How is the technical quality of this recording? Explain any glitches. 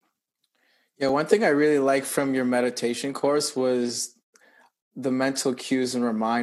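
The recording has one glitch, a very short dropout in the speech.

A block of digital silence occurs at 1.09 s, lasting about 2.5 ms. For that moment the signal is replaced by zeros, and the audio stops and resumes abruptly with no fade. A block like this can come from the playback or processing software failing to deliver samples to the output buffer in time, or from a calculation producing invalid values. A gap this brief is too short to register as silence and comes across as a tick or dip in the speech.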